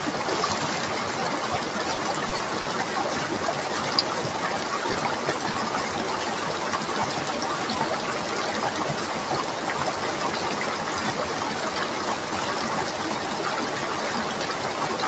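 A recording of everyday sounds carried over a call link that repeatedly lost packets between 1.95 and 2.66 s. Four gaps, the longest 30 ms, were patched by extending the preceding sound, leaving that stretch choppy. Two more isolated losses, short concealed packet loss at 4.93 and 5.53 s, each hid about 20 ms behind a synthetic continuation, heard as a brief smear or wobble. Throughout, the audio carries coding noise and stops at 8 kHz, consistent with a wideband Opus call path.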